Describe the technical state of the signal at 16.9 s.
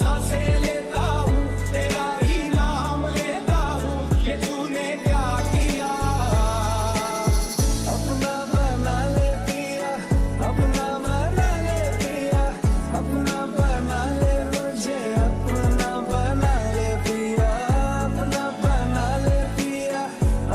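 At 16.9 s the signal is intact, with no dropout, clipping, glitch or other fault to be heard at that point.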